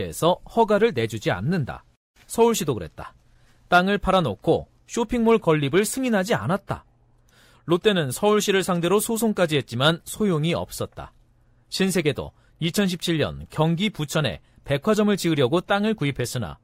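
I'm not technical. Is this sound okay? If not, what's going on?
Yes, nothing's going wrong with this one, so you can relax and just listen.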